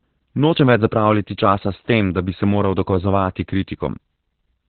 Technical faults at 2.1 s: Opus voice compression

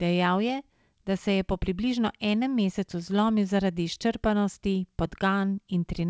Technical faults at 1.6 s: none

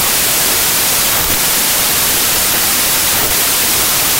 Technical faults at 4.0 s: wrong sample width

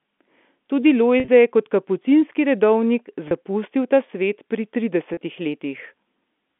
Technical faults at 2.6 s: none

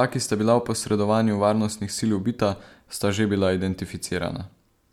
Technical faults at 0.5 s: none

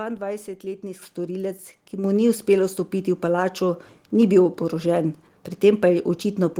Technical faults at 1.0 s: microphone volume stepped up

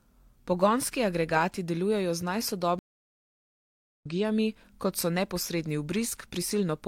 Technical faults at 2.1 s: none

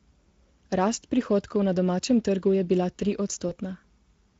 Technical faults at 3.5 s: Speex codec; VoIP packet loss concealed by the speech codec

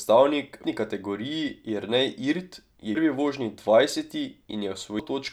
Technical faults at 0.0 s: none

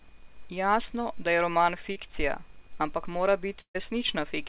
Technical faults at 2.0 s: short concealed packet loss

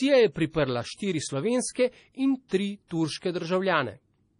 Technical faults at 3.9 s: MP3 compression

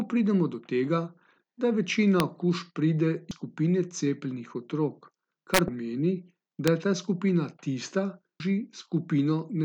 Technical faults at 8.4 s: damaged data in a compressed stream

